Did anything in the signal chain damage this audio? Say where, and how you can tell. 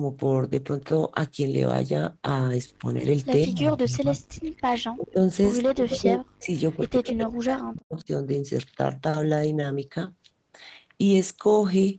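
Yes, in the call processing stage. Speech suppressed in double talk appears at 3.45–5.19 s, 5.74–6.51 s and 6.77–8.08 s. In each span the speech dips by as much as roughly 40 dB, losing level and thinning or breaking up in pieces. The gated portions add up to a few seconds. The likely cause is an echo canceller that could not separate the near talker from the far-end signal while both were active, so it attenuated everything.

Echo leak is the second fault. Faint scraps of a delayed copy of the speech appear at 4.40–4.49 s and, much louder, at 5.90–5.98 s, both trailing the speech by 180 ms. A longer, fairly strong stretch follows at 6.72–7.25 s, with a 139 ms lag. They likely come from loudspeaker pickup on one side that its echo canceller failed to remove fully, so the residue was sent back down the line.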